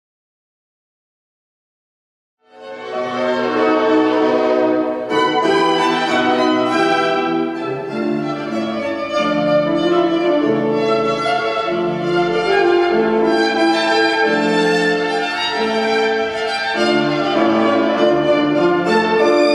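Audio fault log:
No faults found; the fade-in from around 2.5 s, reaching full level at 3.74 s, is smooth with no click or hard edge.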